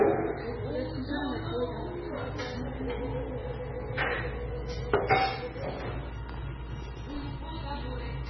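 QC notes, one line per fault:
Throughout, MP3 compression: the sound has nothing above about 5.9 kHz and turns watery and swirly, with smeared attacks. Heavy damage, likely from a very low bitrate around 16 kbps, unlike a plain low-pass.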